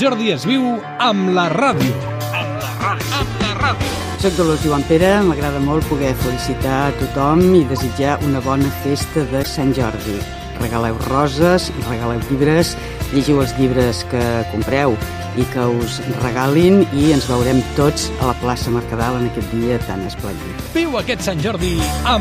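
At 2.02 to 2.12 s, 7.77 to 7.81 s and 9.42 to 9.47 s, a corrupt frame decoded: damaged compressed frames were played anyway, scattering misplaced spectral energy. Each gives a short chirp or noisy blip, the later two louder, peaking around -10 dBFS.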